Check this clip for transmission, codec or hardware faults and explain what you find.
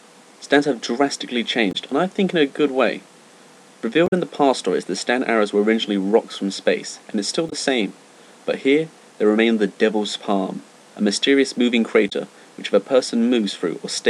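There is one fault type: damaged data in a compressed stream, heard four times, at 1.71 s, 4.06 s, 7.49 s and 12.08 s. Each lasts roughly 40 to 70 ms, the longest at 4.06 s. Corrupted bytes in the coded frames make the decoder misread them, lose sync and hunt for the next valid frame header. The result is a brief chirp, squawk, click or short hole.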